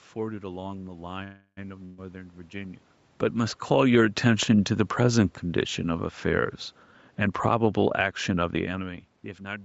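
Speech, carrying four call-path faults. From 1.23 to 1.59 s the sound stalls: the last sound is stretched into a fading buzz or hiss that ends in about 70 ms of silence, then the speech picks up exactly where it stopped. That is a call audio freeze, likely from packets held up in transit draining the jitter buffer. Unlike a loss, it inserts roughly 340 ms of delay and nothing is skipped. At 1.85 to 2.00 s a burst of packet loss gives a similar held, fading tail, but here the speech resumes further along, with about 120 ms of it gone, so the gap shows up as a jump in the speech rather than a pause. Between 3.56 and 3.96 s the automatic gain is falling: the level sinks by about 4 dB over those 0.4 s, and the background drops with it. That shared drop separates it from a talker moving, which changes only the speech. From 6.79 s to 9.57 s a jitter buffer speed-up plays the speech about 11% fast at unchanged pitch, trimming around a third of a second in many tiny pitch-period cuts, so it sounds hurried rather than broken.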